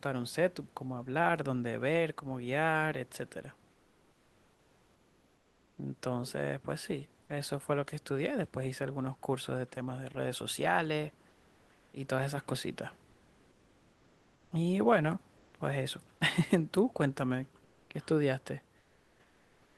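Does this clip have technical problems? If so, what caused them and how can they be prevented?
Yes. The sender likely stopped transmitting during pauses (Opus DTX), and the receiver inserted comfort noise in place of the background at 3.71–5.77, 11.29–11.93, 15.37–15.53, 17.63–17.89 and 18.79–19.77 s. The room noise turns flat, featureless and up to about 4 dB quieter. Disabling DTX prevents this.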